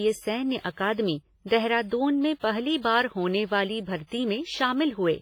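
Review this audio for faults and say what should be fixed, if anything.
The speech carries heavy WMA compression artefacts, likely from a low-bitrate encode around 24 kbps: ringing, washy texture and hiss that swells with the voice. A spectrogram shows patchy, smeared high bands with gaps where weak lines vanish. Encoding from the source at a higher bitrate prevents this.

Pre-echo appears at 0.59–0.64 s, at 2.39–2.44 s just before "पहली बार होने वाली", and at 4.07–4.12 s just after "पहली बार होने वाली". Each time, about 45 to 49 ms of hiss runs ahead of a sharp attack, softening it. The waveform shows noise before each onset. A codec with block switching for transients prevents it.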